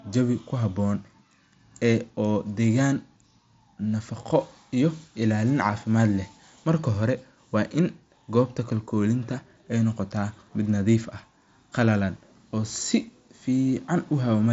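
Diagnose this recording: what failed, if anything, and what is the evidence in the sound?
Nothing in this speech recording stood out as a failure on listening; the sound carried through the Bluetooth mSBC headset path as that wideband link normally delivers it.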